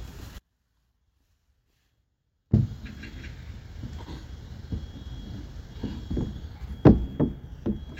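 At 0.39 s the sound drops out abruptly and stays gone until 2.53 s, about 2.1 s. This is an audio dropout to a faint residue. Only a faint leak remains, far below normal level. The signal was likely lost upstream while the later path stayed live.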